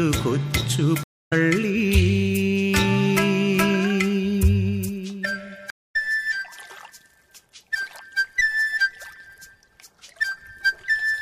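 At 1.03 s and again at 5.70 s the connection dropped and the player had to perform a stream reconnect, restarting its decoder partway through the stream. Each break leaves a hole of silence, about 0.28 s long the first time (ending at 1.33 s) and about 0.24 s the second (ending at 5.96 s). When the audio returns it has jumped ahead, by roughly 150 ms and then 200 ms, so a short stretch of sound is simply missing.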